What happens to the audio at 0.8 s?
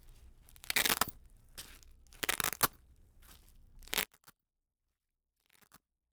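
Nothing goes wrong at 0.8 s; the sound carries on intact through that moment, with no dropout, click, distortion or other fault.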